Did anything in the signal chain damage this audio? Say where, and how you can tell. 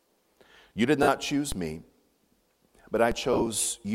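Yes. The codec and Bluetooth radio link dropped LE Audio frames twice. From 1.03 to 1.08 s, 50 ms of sound is replaced by a concealed copy of the preceding spectrum with scrambled phase. This fits about five consecutive 10 ms LC3 frames being lost. Tonal content turns into a short noisy smear rather than a click or a clean gap. From 3.33 to 3.47 s, another 60 ms is lost in short scattered runs of roughly 10 ms each. This gives a fluttering, grainy patch instead of one dropout.

A DC step occurs at the converter or input stage at 1.52 s and again at 3.12 s. Each time, the waveform's zero line jumps and is then drawn back over a few tens of milliseconds, as a 20 Hz high-pass would pull it back. You hear a brief low thump while the audio itself continues intact. That separates it from the frame losses: nothing is smeared or replaced. Only the baseline shifts.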